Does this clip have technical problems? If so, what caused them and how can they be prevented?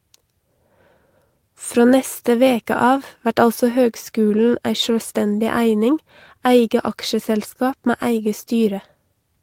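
No, no technical faults heard.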